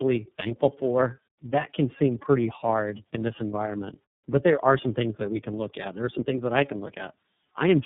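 From start to finish the speech carries tandem speech coding: it sounds as if it passed through three low-rate speech coders in a row, which fits an AMR-NB stage followed by two iLBC stages. Each coder re-encoded the previous one's errors, so the roughness, muffling and warble compound. Nothing reaches above 3.8 kHz. A single low-bitrate codec would sound band-limited but steadier; here the stacked, grainy roughness and wavering vowel timbre show repeated coding.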